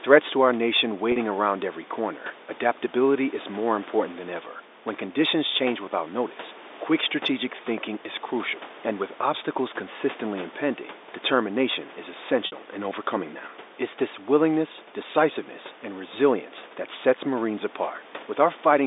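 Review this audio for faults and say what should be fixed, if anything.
Packet loss with pitch repetition occurs at 1.12 to 1.16 s and 12.46 to 12.52 s. The receiver bridged 40 ms and 60 ms gaps by repeating the last pitch period. The first sounds like a brief, buzzy held tone; the second fades into silence, and the speech returns with a short cross-fade. Forward error correction would prevent these gaps.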